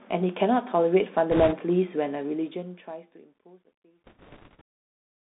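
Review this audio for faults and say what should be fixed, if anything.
Bluetooth CVSD headset codec, throughout: the one-bit delta coding squeezes the speech into roughly 150 Hz to 3.6 kHz, which fits a 64 kbit/s CVSD link. Sibilants turn scratchy and a granular hiss sits underneath. On a spectrogram, everything above 3.6 kHz is empty. Record over a wideband path such as mSBC or LC3, or use a wired microphone.

Bit errors on a Bluetooth voice link, at 1.31 to 1.54 s and 4.06 to 4.61 s: a few percent of flipped bits add a rushing, crackly noise without loud clicks. A spectrogram shows broadband speckle within the band. Improve the radio link by shortening the distance, reducing interference, or enabling retransmission.

Truncation distortion on a fade, from 2.13 s to the end and worst from 3.24 s: the fade-out, smooth in its shape, is computed without dither, which fits roughly 11-bit output. 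The tail turns gritty. Zoomed in, the waveform shows square steps. Apply fades at high resolution and dither before reducing the bit depth.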